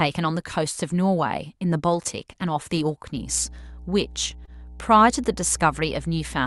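Speech passed through a call codec carries a mains hum from 3.16 s to the end: a steady 60 Hz tone, fairly strong at roughly 15 dB below the speech, likely from a ground loop or nearby transformer. At 4.45 to 4.49 s, short concealed packet loss leaves a brief smear where about 20 ms of audio never arrived and the decoder extended the previous sound before blending back, heard as a soft wobble rather than the silent gap or sharp click of an ordinary dropout.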